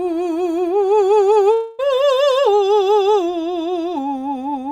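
A music clip with one long network dropout, from about 1.53 s to 1.81 s. The music stops arriving and the last sound is carried on as a fading buzz for roughly a quarter of a second. There is no full silence in the gap. The music then resumes with about 0.26 s missing, so the passage jumps ahead. The likely cause is a run of lost network packets that the receiver covered with concealment.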